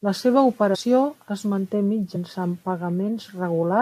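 Compressed frames skipped at 0.74 s, just before "es manté", and again at 2.15 s, right after "es manté". At each point whole coded frames never reach the output, so the speech jumps forward. The first gap loses around ten frames and the second a few, each dropping roughly a tenth of a second of speech.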